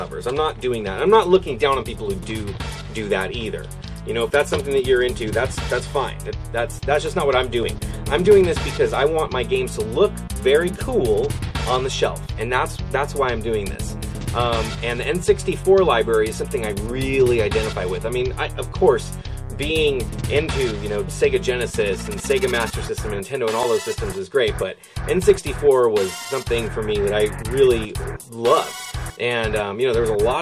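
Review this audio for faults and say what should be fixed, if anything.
Nothing in the audio calls for correction. No fix is needed before it is used.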